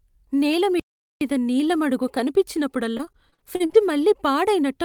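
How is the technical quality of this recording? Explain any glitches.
The quality is compromised by two glitches in this speech clip.

From 0.80 to 1.21 s there's a playback stall: the audio drops to silence for about 415 ms, then resumes. That's likely the player running dry of data or its thread getting blocked, so output simply halts until it catches up.

From 2.97 to 3.76 s you get repeated packet loss, giving that robotic, choppy sound. It sounds like about ten short holes, none longer than about 41 ms. Each gets patched by stretching the previous sound, so roughly 29% of that stretch is filler.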